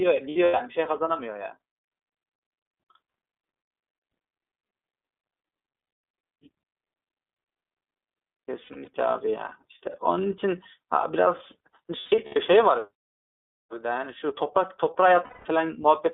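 The whole recording runs through the iLBC codec, and you can hear it. The band is squeezed to roughly 250 Hz to 3.6 kHz, so the speech sounds thin and telephone-like, with a rough, slightly synthetic edge to it. The codec codes each frame's excitation on its own, without leaning on the frame before. The character fits iLBC's 13.33 kbps mode with 30 ms frames.

On top of that there are five bursts of lost iLBC frames, at 0.30 to 0.61 s, 5.78 to 6.02 s, 8.64 to 8.88 s, 11.99 to 12.36 s and 15.24 to 15.46 s. The first four are each a cluster of short dropouts spread over a few tenths of a second. The longest single run is around a tenth of a second. The decoder covers each gap by repeating the last pitch cycle with some noise mixed in, so you hear a brief held, buzzy-breathy vowel. The speech comes back cleanly right after each burst.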